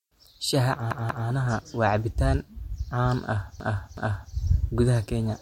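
Repeated frames at 0.91–1.28 s and 3.60–4.34 s replay 0.19 s and 0.37 s blocks twice more, an exact stutter that lengthens the speech rather than dropping any.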